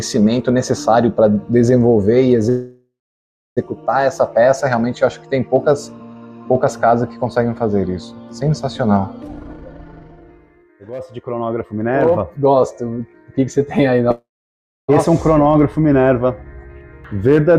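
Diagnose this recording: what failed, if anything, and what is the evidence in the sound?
Two call audio freezes, at 2.49 to 3.59 s and 14.11 to 14.90 s. Each time the last bit of sound gets stretched into a short fading buzz, goes quiet for about 0.65 s, then picks up exactly where it left off. Nothing is missing; about 1.07 s and 0.77 s of delay gets inserted. That's the network stage: packets were likely held up in transit, the jitter buffer ran dry, and the receiver filled the wait.

Then there's a jitter buffer speed-up from 9.24 to 11.80 s. The audio runs at about 142% speed with the pitch unchanged, so it sounds rushed rather than chipmunky. This is the receiver's buffer, not the network itself. The buffer was holding too much audio, so it kept cutting out short pitch-period slices, roughly a second's worth in total, to bring the delay back down.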